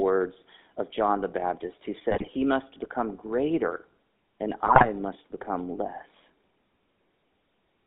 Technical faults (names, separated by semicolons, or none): GSM full-rate codec; GSM bit errors